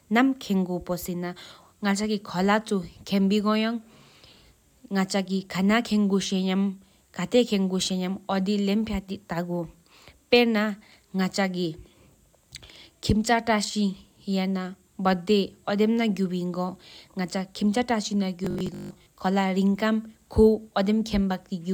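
From 18.45 to 19.09 s the speech takes on robotic sound from repeated short buffers: a rigid 50 Hz metallic buzz. The likely cause is audio arriving too seldom, with about half the signal replaced by repeats of a 20 ms segment.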